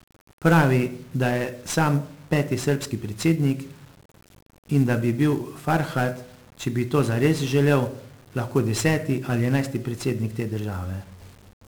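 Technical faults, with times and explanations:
Throughout, 1-bit DFPWM compression: each sample steers an adaptive level up or down, so strong broadband quantisation noise makes the speech fuzzy and crackly, treble buried in hiss.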